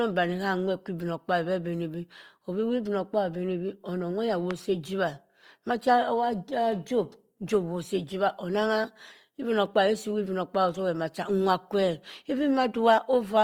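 From the start, the whole speech clip carries plainly audible Opus compression damage. The encoder appears to be running in its music (CELT) mode at full bandwidth, holding the energy of each band but filling the detail with folded or noise-like content when bits run short. Voiced sounds come across rough and grainy rather than swirly, and the texture fits a likely low bitrate of around 24 kbps.

At 4.51 to 4.53 s a single loud pop sits on top of the speech, peaking roughly 10 dB above it, while the speech continues underneath without a break. It is a sharp, brief click-thump, the signature of a sudden voltage step or pulse entering the chain, likely from a plug, switch, static discharge or driver glitch, with the following circuitry shaping it into the short transient heard here.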